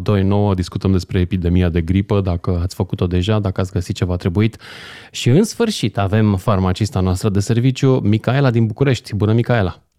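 From 0.49 to 2.49 s, the speech slows by 5.56% and drops about a semitone, then snaps back. After "ați găsit ceva trebuit", from 4.94 to 6.47 s, it speeds up 5.56% and rises nearly a semitone until "noastră de serviciu". Both are likely drift correction steps, where clock-matching software briefly shifted the playback rate.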